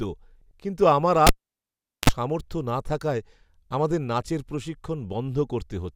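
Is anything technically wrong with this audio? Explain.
Yes. There are two faults.

From 0.41 to 0.51 s, the speech has frames out of order. Two neighbouring runs of frames swapped places before decoding. Each run is about 48 ms long, which fits two frames of roughly 24 ms each. The stretch therefore plays with its halves exchanged. It sounds like a brief garbled flutter. No time is lost, and the speech carries on in step afterwards.

From 1.27 to 2.10 s, there is a cable pulled and plugged in. A live lead came out of its socket and went back in. A pop opens the fault at 1.27 s. Near silence follows for about 780 ms. While only the plug's tip touches, there is a 44 ms burst of 50 Hz mains buzz. A second pop sounds as the speech comes back at 2.10 s.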